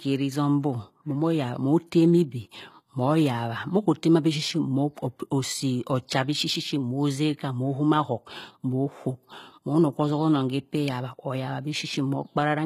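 A speech recording with HE-AAC compression throughout, likely from low-bitrate encoding around 20 kbps. The treble sounds bright but synthetic: s sounds turn gritty and lispy. Plain band-limiting would sound dull, but this treble is pasted in from lower bands and stops near 14.9 kHz.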